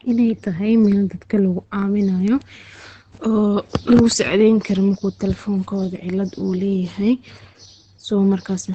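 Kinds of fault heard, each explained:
Opus compression: The speech is likely Opus in its speech (SILK) mode; it sounds muffled and hoarse throughout, with nothing above about 8.6 kHz, which fits a wideband setting near 16 kbps. It sounds hoarse rather than swirly like MP3, and coarser than a plain low-pass.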